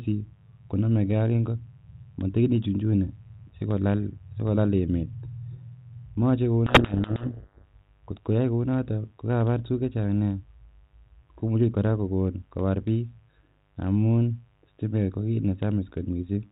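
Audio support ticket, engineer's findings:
Steady raspy buzz under the speech for the whole clip, faint, roughly 40 dB below it. Mains buzz at 50 Hz, harmonics running into the kHz range. Likely cause is a dimmer, rectifier or unshielded lead injecting switching spikes twice per mains cycle. Check grounding and cable screening.

Speech buried in harsh, gritty distortion from 6.66 to 7.64 s, then the distortion stops. Codec payload misread: the G.726 code words are being read in the wrong bit order, so the decoder runs its adaptive prediction on scrambled differences. The 32 kbit/s G.726 path sounds as expected outside this window. Check packing and bit-order settings at both ends.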